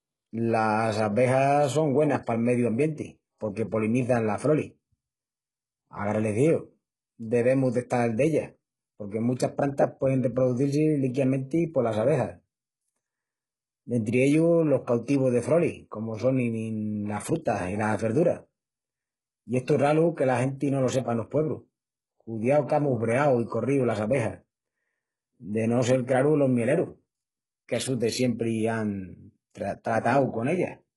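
Throughout, sibilants sound gritty and metallic over treble that stops near 11.4 kHz, likely HE-AAC compression at a very low bitrate, around 12 kbps, rebuilding the highs by band replication.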